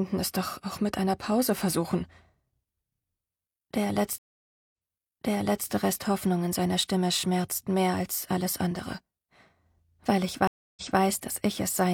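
The audio has two stream reconnects. At 4.18 s the connection drops and the player goes silent for about 0.53 s. A fresh decoder then picks up mid-stream, and playback resumes 0.98 s earlier than where it stopped, so that stretch repeats. The event ends by 5.69 s. A second reconnect runs from 10.47 to 11.00 s, with a 0.29 s gap, and jumps back 0.23 s. Backward jumps like these point to the server resending a burst of buffered audio.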